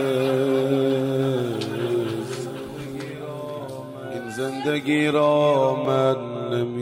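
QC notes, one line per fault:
5.85 s, block of digital silence: the signal drops out for about 1 ms and returns with no fade either side. The two hard edges sit too close to separate, so the gap is heard as a single sharp tick rather than a hole, likely from an output buffer not filled in time.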